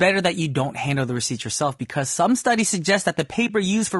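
From start to finish the speech sounds rough and grainy, with a hiss-like haze filling the gaps between the harmonics and a top band that sounds thin and somewhat synthetic. This damage is plainly audible and is likely low-delay AAC compression of the AAC-ELD kind. Its short frames resolve pitch harmonics poorly, and with few bits to spare, which fits a rate around 32 kbps, the encoder fills detail with noise.

At 3.47 to 3.50 s the sound briefly fades out and back in, leaving a brief dip. This is AAC frame loss with muting. The audio fits one lost frame of about 20 ms that the decoder replaced with silence, zeroing its spectrum. The overlapping windows on either side then smear that gap into a gentle dip rather than a hard cut.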